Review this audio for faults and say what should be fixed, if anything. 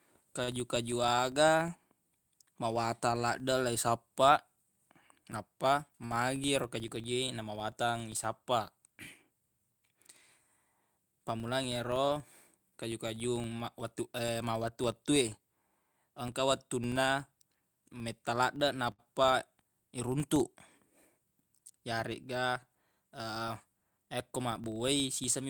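There's a steady 25 Hz buzz running under the whole speech track that rises and falls with loudness. That's a filter restarted on every block, which fits 40 ms blocks, each one starting from zero state. Carry the filter state across block boundaries.

Short stalls from late packets hit at 6.05 to 6.12 s and 18.92 to 19.00 s. The jitter buffer ran dry and the last sound got stretched by 51 ms and 69 ms. Give the jitter buffer a bit more target depth so it doesn't run dry.

There's jitter buffer speed-up from 10.98 to 14.21 s at 102% and from 22.35 to 24.41 s at 103%. Pitch holds, but tiny pieces get trimmed to cut delay, around a tenth of a second and a bit less. Use gentler catch-up, spreading the trimming over a longer stretch.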